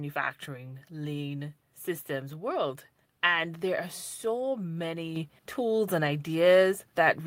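A microphone volume step-up occurs at 5.16 s, just before "tools and". The call software judged the microphone input too quiet and raised the device's input volume in a single jump rather than a gradual ramp. From that instant everything the microphone captures gets louder by about 5 dB, the voice and the background noise alike, so the level change sounds like an abrupt shift in the whole scene rather than the speaker getting louder.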